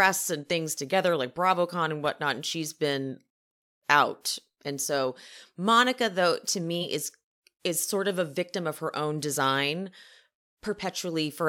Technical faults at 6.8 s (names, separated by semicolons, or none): compressed frames skipped